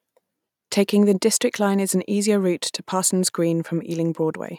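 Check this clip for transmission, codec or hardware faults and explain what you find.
No faults detected.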